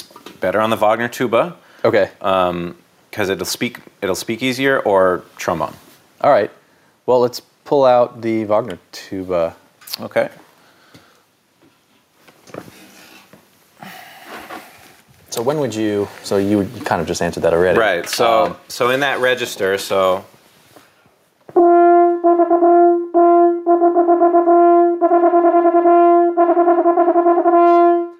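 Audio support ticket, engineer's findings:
Gain pumping, throughout the recording. Level swings around 20 dB. Dynamics squashed, loud and soft passages close in level. Likely cause: input gain set far too high, with a fast limiter or compressor clamping it on every peak.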